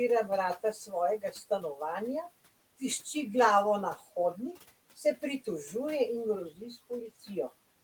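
Between 1.21 and 1.80 s, parts of the speech turn faint and swallowed, dipping by about 10 dB at the deepest point, with around a tenth of a second affected in total. This is speech cut by the noise suppressor: it mistook those quieter stretches for background and pulled them down along with the room noise, which sits about 21 dB under the speech. The softer sounds therefore lose their edges instead of carrying through cleanly.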